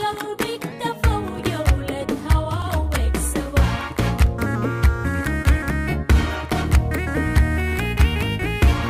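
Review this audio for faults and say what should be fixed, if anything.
A brief click or buzz is heard at 2.62 s and again at 4.27 s. Each is a repeated buffer: new audio arrived late, so the device replayed its last block, a piece about 1.33 ms long that fits a 64-sample buffer. That block plays three extra times at 2.62 s and twice at 4.27 s, with a hard join at every repeat, and almost no audio is lost. To prevent it, use a larger buffer or give the audio thread higher priority so each block is delivered on time.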